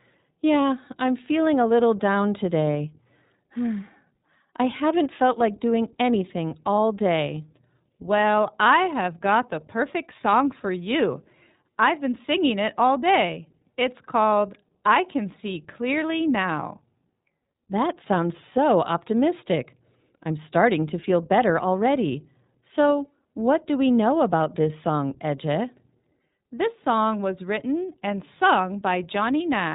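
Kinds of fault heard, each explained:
iLBC codec: narrowband speech coding in independent 20 ms frames, nothing above about 3.8 kHz, leaving the speech plainly rough and synthetic, consistent with 15.2 kbps.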